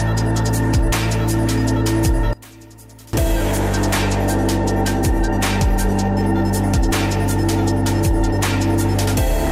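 From 2.33 to 3.13 s the sound collapses to a faint trace, about 24 dB down, likely because one channel is inverted, cancelling shared content when summed. A waveform shows a sudden narrow gap; a spectrogram shows that band nearly emptied.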